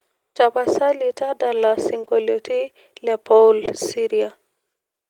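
At about 2.01 s there's short concealed packet loss, and it runs straight into a second one at 2.05 s, so the gap stretches to roughly 2.09 s. A bit of the call didn't reach the decoder in time. Each time, the receiver covered about 20 ms by carrying the previous sound forward and then eased back into the real signal. You hear it as a brief smeary wobble. It happens again at 3.65 s, where it's the same length.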